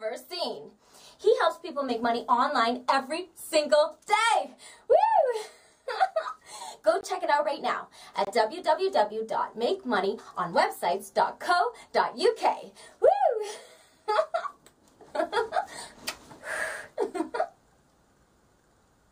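A block of digital silence falls at 7.01 s, lasting 20 ms, and a second at 8.25 s, lasting about 23 ms. In each, a run of samples has been replaced by zeros, the kind of gap left when the output buffer is not filled in time. The sound drops to silence and returns with no fade, and the pair comes across as two short holes.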